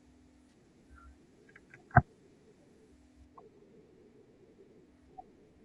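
From the start, the speech has a rough, grainy texture, with noise filling the gaps between the harmonics and an upper band that sounds thin and partly synthetic. This is the signature of low-delay AAC compression, likely AAC-ELD as used in video calling. Its low-delay window codes about 500 frequency lines a frame, and at a low rate the coder cannot spend enough bits to keep the spectrum clean. The degradation is plainly audible and fits a bitrate around 32 kbps.

At 0.49 s a brief disturbance runs to 0.53 s, about 40 ms long, consistent with a couple of consecutive lost frames. This is AAC frame loss with concealment. The decoder, missing those frames, rebuilt the gap from the last spectrum it received, reusing its energy but not its true phase. The result is a short smeared, noisy or phasey patch rather than a dropout to silence, because the gap was too short for the concealment to fade out.

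From 3.25 s to the end of the clip the sound becomes noticeably duller and muffled, as if a blanket were laid over it. This is de-emphasis applied wrongly: a treble-cut filter meant to reverse pre-emphasis was run on audio that didn't need it, or run a second time. The response tilts smoothly downward with frequency, reaching about 8 dB lower at 10 kHz than at 1 kHz, which takes away presence and consonant crispness.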